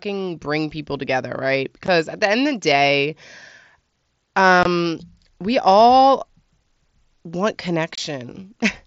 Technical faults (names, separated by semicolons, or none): unconcealed Bluetooth headset packet loss